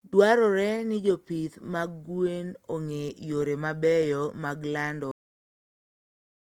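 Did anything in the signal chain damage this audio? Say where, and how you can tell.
Yes. There is a cut-off end, introduced at the buffer or storage stage. Just after "yore mabeyo mag lando", at 5.11 s, the speech stops in the middle of a sound. It drops straight to digital silence with no decay. The last buffers were never written.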